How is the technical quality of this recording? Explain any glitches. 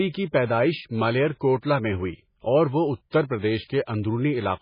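Technical quality is poor: heavy lossy coding runs through the whole speech clip, and one attack is smeared by pre-echo.

MP3 compression, throughout: The bit budget is so tight that the likely cause is an MP3 encode at a very low bitrate, around 16 kbps. The encoder has cut everything above 5.1 kHz and drops weak frequency lines that flicker in and out between frames. The speech therefore sounds dull and muffled, with a watery, swirling texture, metallic chirps on sibilants and softened consonant onsets.

Pre-echo, 3.10 to 3.13 s: A sharp onset lands late in a transform block, and the quantisation noise sized for that loud moment spreads across the whole block, including the silence before it. A short hiss of about 24 ms therefore creeps in ahead of the attack, and the onset sounds blurred and less crisp.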